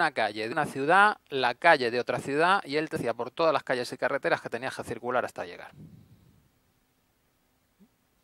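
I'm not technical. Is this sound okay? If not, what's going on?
No. There is damaged data in a compressed stream. Small parts of the stored audio are corrupted, and the player cannot read them. You hear brief chirps or blips at 0.51 to 0.53 s, at 2.95 s, and at 5.81 to 5.84 s.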